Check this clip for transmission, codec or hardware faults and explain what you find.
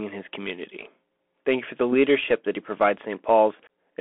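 The speech runs through a Bluetooth CVSD headset codec for its whole length. CVSD encodes one bit per sample, just a step up or down with an adapting step size, consistent with a 64 kbps headset link. Band-limited to roughly 250 Hz to 3.4 kHz, the speech sounds thin and boxy, s sounds turn scratchy, and a granular hiss sits underneath.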